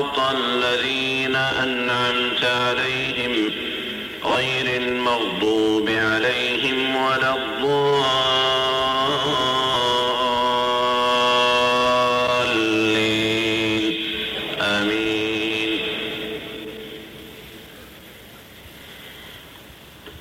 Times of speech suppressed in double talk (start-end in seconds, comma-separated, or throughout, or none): none